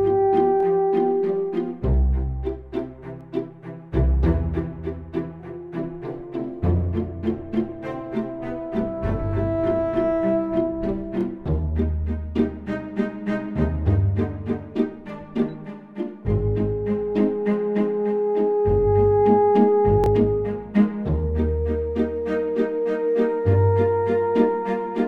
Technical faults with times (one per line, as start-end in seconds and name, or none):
0.60-0.63 repeated buffer
20.04-20.06 repeated buffer